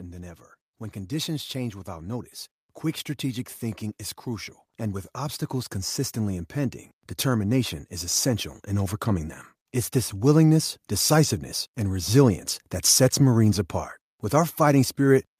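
Automatic gain rising occurs twice in this speech recording, as the gain control judges the input too quiet and lifts level: about 3 dB from 0.92 to 2.35 s, and about 6 dB from 4.24 to 9.39 s, swelling voice and background together.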